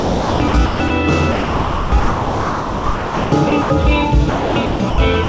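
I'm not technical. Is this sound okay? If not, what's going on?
No. From 0.0 to 0.9 s, 1.32 to 3.7 s and 4.3 to 4.98 s the sound is choppy, swapping in bursts of fake hiss: sound chopped by the voice detector, likely the call software misjudging what's worth sending. At 5.24 s, right at the end, it gives way to steady hiss: sound dropped by the voice detector.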